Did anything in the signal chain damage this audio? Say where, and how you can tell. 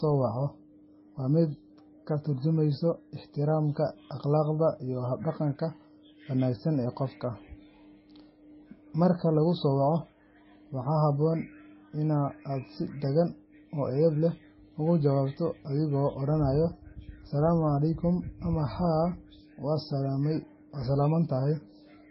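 Yes. Transcoding between lossy codecs runs throughout the speech: stacked, differing artefacts and the lowest cut-off in the chain fit a low-rate MP3 likely re-encoded as Vorbis.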